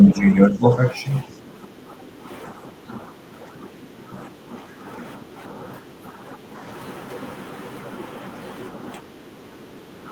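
From 0.1 to 6.45 s the speech is suppressed in double talk: the talker's level sags in patches totalling about a second, dipping by roughly 10 dB. The likely cause is an echo canceller that could not tell the near talker from loudspeaker echo while both sides spoke, so it attenuated everything. On a waveform the envelope shows brief notches, and on a spectrogram the harmonics thin out in short vertical bands.

Within that stretch, from 1.59 to 5.89 s, the background is gated by the echo canceller. The room tone drops by about 9 dB for around half a second in total, because the canceller clamped the microphone while the far end played. On a spectrogram the low-level noise floor between words goes dark, then fills back in when the canceller releases.

The same background gating returns from 9.03 s to the end of the clip, with a dip of about 7 dB in the room noise that shows as a thinner noise floor on the spectrogram. 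Inside it, from 9.64 to 9.68 s, speech is again suppressed in double talk for a brief 40 ms drop of roughly 10 dB. This is likely the same clash between near-end speech and echo, and on the waveform it appears as a single short notch.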